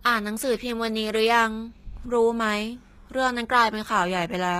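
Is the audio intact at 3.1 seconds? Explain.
No. HE-AAC compression runs through the whole speech clip, including 3.1 s. The treble is likely rebuilt from copied lower bands rather than coded directly, fitting a bitrate near 20 kbps, so the damage is plainly audible: gritty, metallic sibilants and an artificial top end.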